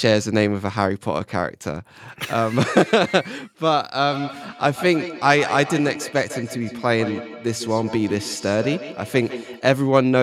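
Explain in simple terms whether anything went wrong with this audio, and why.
From 4.01 to 9.67 seconds, the speech returns as a feedback echo between two devices. Each sound comes back roughly 0.15 seconds later, quieter and thinner. One device plays the call aloud, and a second device's microphone picks it up again.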